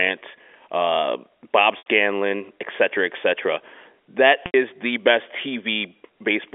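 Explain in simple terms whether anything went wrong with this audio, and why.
Packet loss with pitch repetition happens twice, at 1.78 s and again at 4.46 s, just before "the best". Each time about 80 ms of sound never arrived, which fits a handful of lost network packets. To cover the hole, the receiver kept repeating the last tiny cycle of the voice and faded it out, so you hear a brief held, slightly buzzy sound before normal speech resumes, all within the narrow band of telephone coding.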